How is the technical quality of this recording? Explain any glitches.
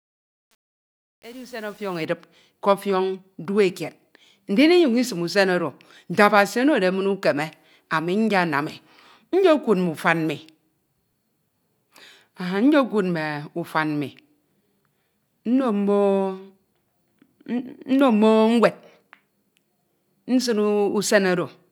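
The recording has one audible glitch, in the speech's opening fade-in. Truncation distortion on a fade runs from 0.0 to 2.05 s. The gain stage keeps too few bits without dither, consistent with 8-bit resolution, so the quietest levels collapse into coarse steps. The fade sounds gritty rather than clean until it reaches full level.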